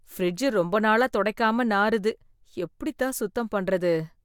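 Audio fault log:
No faults found anywhere in this speech recording.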